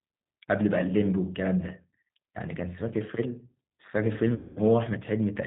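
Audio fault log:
Throughout: G.729 codec. The speech is rebuilt from a vocal tract filter, a pitch predictor and a few pulses per frame, which fits an 8 kbit/s G.729A stream, and the damage is plainly audible as a rough, slightly synthetic edge. On a spectrogram nothing appears above 4 kHz, and the harmonics look smeared and coarse. In the waveform the fine detail between glottal pulses is simplified.
4.35 to 4.59 s: VoIP packet loss concealed by the speech codec. About 210 ms of audio went missing, which fits 21 lost 10 ms frames. The decoder kept repeating its last pitch and filter at falling gain, so the sound stretches into a buzzy tone or coloured noise that fades, and it stays weak briefly after data returns. A spectrogram shows the extrapolated sound thinning out. In the waveform, the signal shrinks steadily in amplitude.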